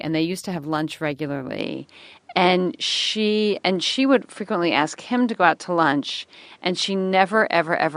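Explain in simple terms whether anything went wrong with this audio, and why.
From 1.59 s on, the speech turns duller, with a new level and background noise. That's likely an input switched to a poorer device.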